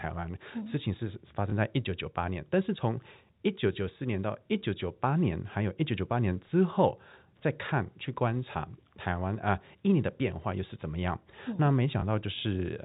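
At 1.5 s and again at 12.0 s the speech gives a brief blip, a tiny hiccup lasting about 20 ms. Both are packet loss with the last packet repeated: one packet went missing each time, and the receiver filled the gap by replaying the previous 20 ms. The narrow telephone band of the G.711 coding is audible throughout.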